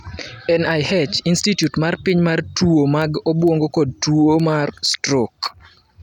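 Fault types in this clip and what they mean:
Word clock ticks, 0.25 to 5.78 s: a digital audio link is being read by a receiver running on its own clock rather than locked to the sender's, here with the two drifting apart by something on the order of 50 parts per million. Each time the clocks slip by a full sample, one sample is lost or doubled, so around fifteen sharp ticks land on the speech at a steady rate of roughly one every half second.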